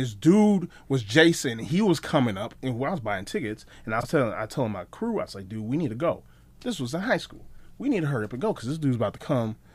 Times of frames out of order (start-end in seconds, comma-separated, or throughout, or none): 4.00-4.06